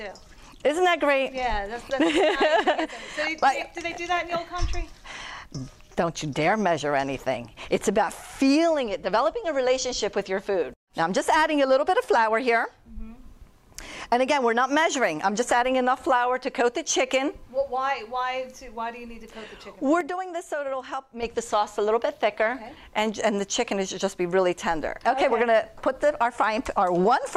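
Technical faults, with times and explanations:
20.01 to 21.23 s: sudden gain jump. The level drops by about 8 dB in one step at 20.01 s and comes back just as abruptly at 21.23 s. Sound and background noise fall together. A digital gain change without a ramp is the likely cause.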